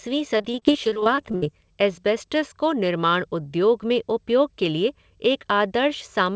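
From 0.38 to 1.44 s the speech breaks up with repeated packet loss, giving a robotic sound. Audio packets kept going missing or arriving late. Each hole was covered by stretching the last bit of sound forward. Then another hole came soon after. The longest gap runs about 64 ms, and about 30 percent of the stretch is patched sound. The result is choppy, with pieces missing. Clean speech returns at "एस्बेस्टॉस को निर्माण उद्योग". The call path also has a band limit, with nothing above 8 kHz, which fits a wideband codec like G.722.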